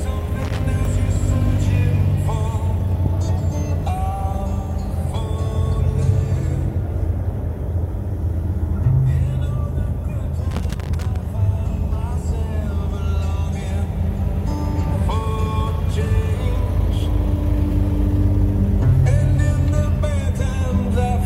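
Loose connector crackle occurs from 0.45 to 0.62 s and again from 10.51 to 11.16 s. A dirty or worn contact keeps making and breaking, chopping the signal into irregular scratchy bursts.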